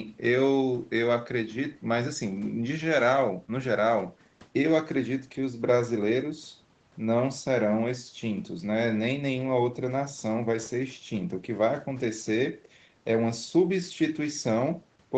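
No faults to report: the speech carries nothing above 8 kHz, as expected from call microphone processing and a WebRTC call path consistent with wideband Opus.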